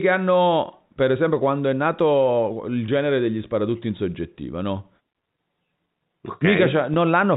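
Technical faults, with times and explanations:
2.86–2.88 s and 6.94–6.96 s, packet loss with pitch repetition: a single 20 ms packet goes missing each time, the first just after "quando è nato il". The receiver repeats the last pitch period to fill the gap, producing a brief, slightly buzzy held tone.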